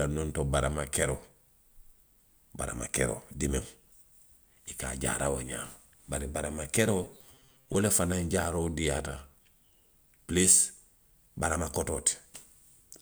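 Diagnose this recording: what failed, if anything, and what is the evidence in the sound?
From 7.03 to 7.75 s the speech collapses into a rigid, metallic buzz pitched near 134 Hz, still loosely tracking the syllables. The failure sits at the driver or buffer stage: this is robotic sound from repeated short buffers, likely caused by audio arriving too slowly, so the software loops a fragment of roughly 7.5 ms. About half the signal is replayed rather than new, and the loop rate imposes that fixed buzz.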